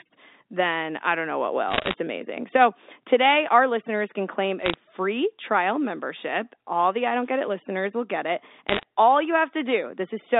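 Speech carried over a G.711 telephone line, band-limited to roughly 250 Hz to 3.7 kHz. Bit errors on a digital phone line hit it three times: 1.69 to 1.94 s, 4.60 to 4.75 s, and 8.69 to 8.83 s. Each burst is a cluster of sharp ticks riding over intact speech. A flipped bit corrupts one 8-bit sample. When the sign or a high-order bit flips, the sample jumps far off the waveform and clicks. The first burst is densest, near 1.5 percent of bits. The second is lighter, under 1 percent. The third is around 1 percent. From 7.06 to 7.56 s there is a different sound, an unreliable data bit. Here one data line is marginal, so the same bit goes wrong in a random share of samples. Every error makes a spike of equal size. The result is an even crackle or fizz for that half second. Unlike the bursts, it would not follow the speech.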